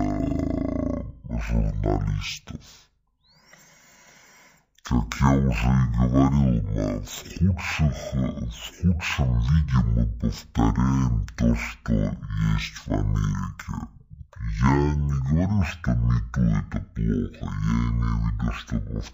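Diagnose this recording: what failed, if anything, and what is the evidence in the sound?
The fault is stereo read as mono, at the sample-format conversion stage where the channel layout is interpreted. Throughout the speech, playback runs at half speed and a full octave (12 semitones) low. The interleaved left and right samples are being read in sequence as one channel, so each frame lasts twice as long. A plain sample-rate mismatch would slow and lower the sound the same way. Here, though, a fainter mirrored copy of the sound also sits in the upper half of the spectrum.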